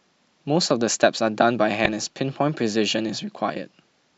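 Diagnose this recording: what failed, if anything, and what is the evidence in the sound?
Damaged data in the compressed stream corrupts the speech at the codec stage: a brief glitch from 1.85 to 1.88 s, about 30 ms long. Corrupted bytes there caused the decoder to misread the affected frames and lose sync until it found the next valid frame header.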